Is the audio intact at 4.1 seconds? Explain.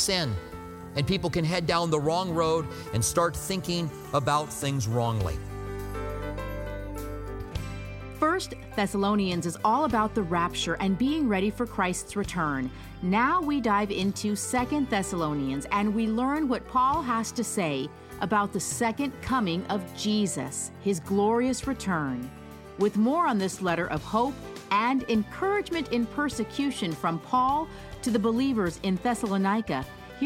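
Yes, at 4.1 seconds the audio is intact, with no dropout, click, distortion or other fault to be heard at that moment.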